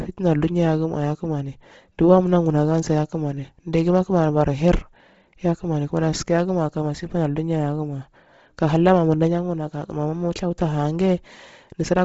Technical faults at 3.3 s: Bluetooth LC3 compression

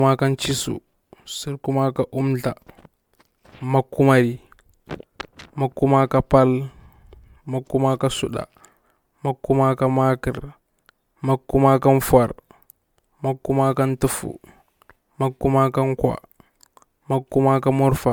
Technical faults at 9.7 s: generation loss

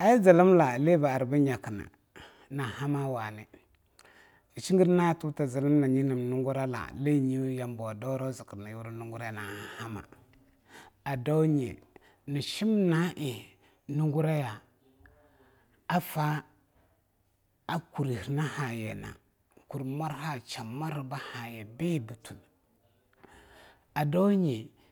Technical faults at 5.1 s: none

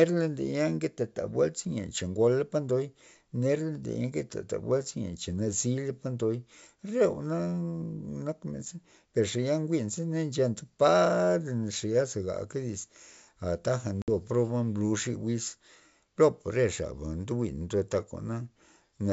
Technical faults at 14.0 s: packet loss on an ADPCM call

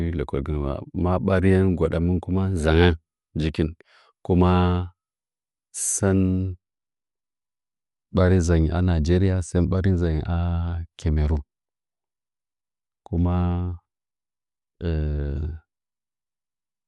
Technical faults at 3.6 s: Dolby Digital compression

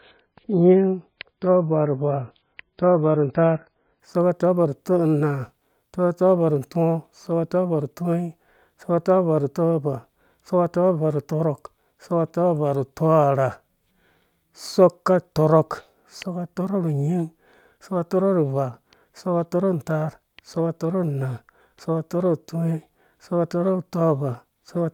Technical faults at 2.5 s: adaptive stream starting at a low bitrate

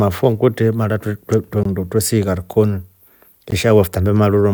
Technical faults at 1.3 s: electrical switching spike

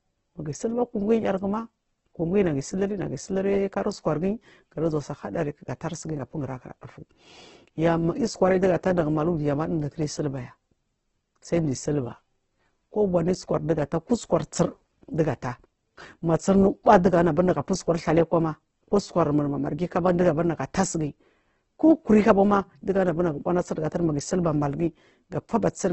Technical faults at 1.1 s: Opus compression

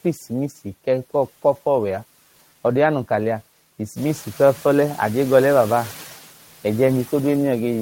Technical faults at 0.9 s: noise suppressor artifacts

